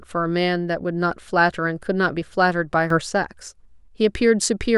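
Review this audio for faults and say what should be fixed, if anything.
A sudden gain jump hits the speech from 2.90 to 3.01 s. Level rises by about 7 dB in a single step, background noise included, then drops back. The likely cause is a gain change applied without a ramp. Smooth every gain change over several milliseconds.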